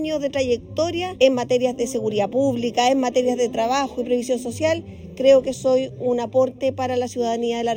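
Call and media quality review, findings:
Channel delay (comb filtering), throughout clip. Hollow, phasey sound. One channel lags by roughly a third of a millisecond before mono sum. Spectrogram: fixed dark horizontal notch bands, first near 1.5 kHz, then evenly spaced above. Probable component: stereo-to-mono downmix.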